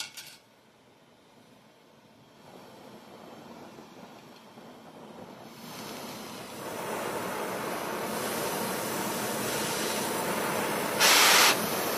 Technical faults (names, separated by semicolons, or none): clock slip clicks; damaged data in a compressed stream